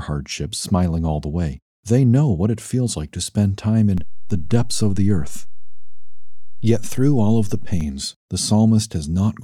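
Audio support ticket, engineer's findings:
DC step at 3.98 s, just after "like to spend time": low thump as the zero line jumps about -19 dBFS and holds until 7.81 s. Waveform shows a shifted baseline block; spectrogram shows a broadband click at the onset. Probable converter recalibration or offset input switched in.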